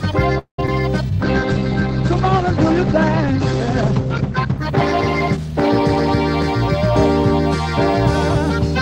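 The audio stalls from 0.38 to 0.59 s, fading to near-silence for about 110 ms before resuming where it left off. A call audio freeze, likely from delayed packets draining the jitter buffer. At 0.66 s, a brief smear covers about 10 ms of missing sound. This is short concealed packet loss, patched by extending the preceding audio. From 1.22 to 8.15 s, the sound turns rough and muffled, with the top end falling from 20 kHz to 8 kHz. This call bitrate drop fits an encoder cut from about 64 to 14 kbps, bottoming out for roughly three and a half seconds.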